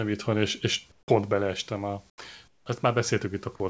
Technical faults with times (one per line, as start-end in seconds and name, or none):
0.92-1.08 comfort noise in place of the background
2.10-2.18 comfort noise in place of the background
2.48-2.66 comfort noise in place of the background